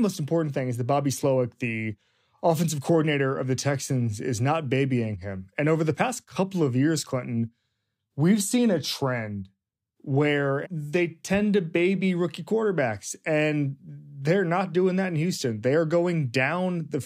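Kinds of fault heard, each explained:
No technical faults heard.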